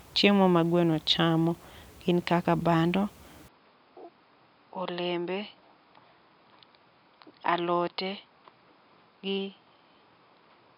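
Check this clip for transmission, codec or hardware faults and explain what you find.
One fault: from 3.48 s, right after "kaka bando", to the end, the likely cause is an input switched to a poorer device. Content above 5.2 kHz disappears, the level drops by about 10 dB, and a faint new noise floor appears, with no silence at the switch. A lowpass filter would not also change level and noise.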